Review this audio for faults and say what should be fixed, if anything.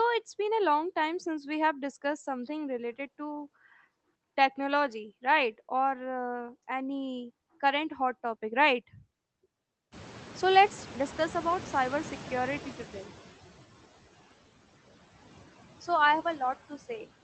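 Throughout the speech, the background pumps: it drops away in the gaps and swells back under each phrase. These are noise suppressor artifacts. The suppressor decides frame by frame which frequency bands hold steady noise and pulls them down by about 14 dB. A gentler suppression depth or a smoother gain curve across frames and bands would keep the residue steady and the voice fuller.

Around 10 s, the room noise jumps by about 20 dB. From 9.92 to 13.18 s, that louder noise sits less reduced under the speech before settling down again. This is the noise suppressor catching up. Its noise estimate was tuned to the quieter room and took about 3.3 s to track the new level. During that span it cut only about 10 dB, and after the rise the noise sits about 17 dB below the speech. A faster-adapting noise estimator, or one that reacts sooner to sudden level changes, would shorten this exposed stretch. 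The band-limited top end, which stops near 8 kHz, comes from the call codec and is not part of either fault.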